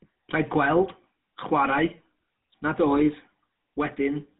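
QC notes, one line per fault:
Throughout: GSM full-rate codec. The speech has a plainly audible buzzy, gravelly roughness, and nothing survives above 4 kHz, which fits a 13 kbps full-rate coder. Plain band-limiting would only dull the sound. Here the coarse pulse-driven excitation adds a grainy buzz on top of the missing highs.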